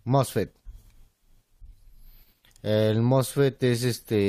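At about 1.57 s you get a tiny skip, and the same thing happens again right at 3.57 s. That's an overlap between stream segments: two neighbouring chunks claimed the same slice of time, so the player trimmed roughly 16 ms of speech that was never actually duplicated. The waveform jumps across the gap. The exact 2 s spacing lines up with the segment length, so every boundary gets hit.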